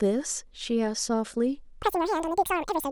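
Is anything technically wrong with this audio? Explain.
Yes. From 1.83 s to 2.92 s the speech jumps to double speed and an octave higher: audio read two samples at a time.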